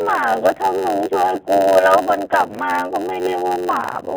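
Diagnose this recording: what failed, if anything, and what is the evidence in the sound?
The codec stage failed. The speech has the rough, slightly synthetic quality of G.729 at 8 kbit/s, and nothing above about 4 kHz survives. The speech is rebuilt from a vocal tract filter and pitch predictor with sparse pulses, so the damage is plainly audible throughout.

A block size mismatch (padded) at the driver or buffer stage runs throughout. Each block is written about 8% short and zero-filled, giving a steady buzz at about 91.9 Hz. The speech also plays at 0.919 times normal speed while keeping roughly its original pitch.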